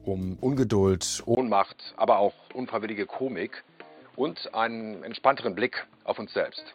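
At 1.35 s there's a brief dropout, then everything goes dull and boxy to the end, with nothing above 4.6 kHz, a level drop of about 5 dB and a new low hiss. That's likely the input switched to a poorer device.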